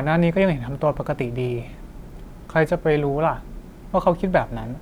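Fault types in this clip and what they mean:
There are no fault types in this clip.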